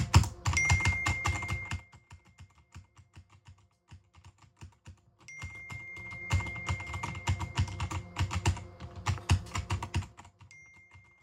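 From about 4.95 to 6.4 s there's zipper noise. The level moves in coarse 3 dB jumps, around seven a second, instead of gliding, so each jump leaves a small click. Across a change of roughly 25 dB you hear a ticking zip riding on the sound.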